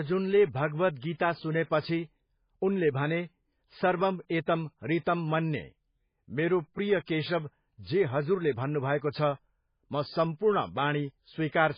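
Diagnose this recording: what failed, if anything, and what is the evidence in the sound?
Codec stage, throughout the speech. Nothing is heard above 5 kHz, and the sound is heavily watery and swirly. This is likely MP3 compression, with damage that fits about 16 kbps. Starved of bits, the encoder cut the treble and let weak frequency lines flicker between frames.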